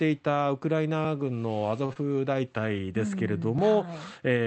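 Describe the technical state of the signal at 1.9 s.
A short stall from a late packet runs from 1.85 to 1.91 s. A packet arrived behind schedule, the jitter buffer emptied, and the receiver stretched the last stretch of speech by about 37 ms until the data showed up. It then resumed from the same point, so nothing is lost, but the sound hangs on slightly too long with a faint buzzy or dipping quality. The playout delay grows by those same 37 ms.

A short concealed packet loss follows at 1.93 to 1.97 s. About 20 ms of the call never reached the decoder in time. The receiver bridged the gap by extending the preceding sound, pitched if voiced and noise-like if not, then cross-faded back into real audio. This leaves a brief smear or wobble, and a short consonant there can disappear. Both events sit on the Opus call path, whose coding noise and 8 kHz upper band limit continue through this span.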